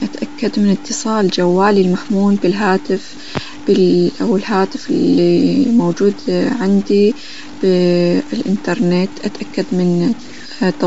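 A speech recording carries two faults for its whole length. The first is grainy distortion that rises and falls with the voice, at roughly 20 dB below the signal. That tracking is what marks low bit depth without dither, likely from truncation to about 6 bits, rather than steady added noise. The second is a breathy, noise-filled top with nothing above 7.7 kHz, plainly audible as codec damage. This points to Bluetooth LC3 compression at around 32 kbps with 10 ms frames, not a simple low-pass filter, since the upper band is filled with noise rather than cleanly removed.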